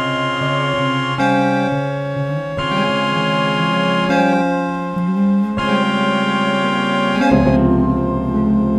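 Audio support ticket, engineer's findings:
No audible faults found.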